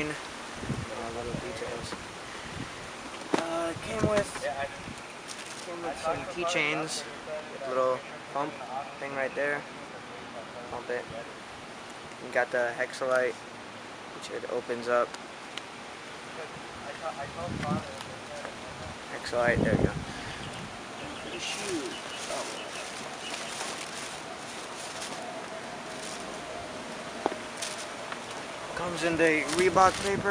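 No technical faults are audible anywhere in the clip.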